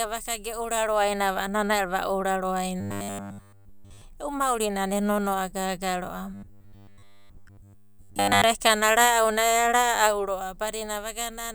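Robotic sound from repeated short buffers at 2.81–4.02 s and 6.34–8.44 s: a rigid 100 Hz metallic buzz follows the speech only roughly, likely from a roughly 10 ms buffer looped in place of nearly all incoming audio.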